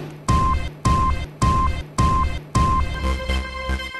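At 0.68 s the audio falls into a broken-record loop that runs until 2.94 s. A fragment about 0.57 s long plays four times back to back, each repeat identical, so the same short slice of sound cycles. This is likely a stall in the player, encoder or stream, which kept resending the last buffered fragment; whatever should have sounded across those 2.3 s is missing.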